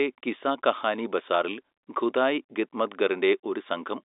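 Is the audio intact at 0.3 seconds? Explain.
Yes, the audio is intact at 0.3 seconds, with the speech coming through on an ordinary G.711 telephone line whose band stops near 3.8 kHz.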